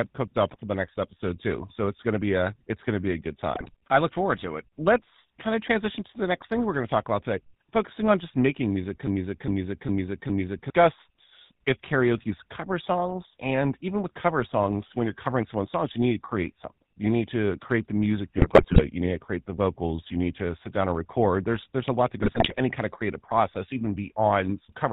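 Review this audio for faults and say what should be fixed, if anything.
The speech passes through the GSM full-rate codec for its whole length, at a coding rate that fits the 13 kbps full-rate coder. The codec replaces the real vocal excitation with a sparse, regularly spaced pulse train feeding a vocal-tract filter, and it discards everything above 4 kHz. The result is a dull, band-limited voice with a clearly audible buzzy, gravelly grain, harshest on the higher-pitched parts of the speech. To fix it, capture or deliver through a wideband path rather than transcoding through GSM full rate.

GSM bit errors occur three times, from 3.55 to 3.7 s (between "to be a good" and "I look forward to"), from 18.38 to 18.82 s, and from 22.22 to 22.59 s (between "there's a lot that" and "any kind of creative"). Corrupted bits reached the decoder at error rates of roughly 6.1%, 4.2% and 3.9%. That damage garbled the filter, pitch and gain parameters across 7, 21 and 18 consecutive 20 ms frames, and the speech collapses into squawks, pops and gargling for those stretches. 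To fix it, use a stronger radio link or error protection so corrupted frames are concealed rather than decoded.

A broken-record loop runs from 9.07 to 10.70 s, right after "on just making music". The most likely cause is that the player or stream stalled and kept re-sending the last buffered fragment. A 0.41 s piece repeats four times back to back, and the speech that belonged in that interval is simply missing. To fix it, make the playback chain drop to silence or resynchronise on underrun instead of replaying stale buffer contents.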